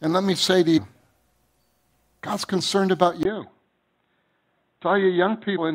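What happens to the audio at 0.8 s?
At 0.77 s, right after "let me say to", compressed frames are skipped: the decoder never plays a short run of encoded frames, either because they are missing or because it rejected them as corrupt. The audio jumps forward by about 150 ms, which fits around seven frames of roughly 21 ms each. The sound resumes slightly ahead of where it left off.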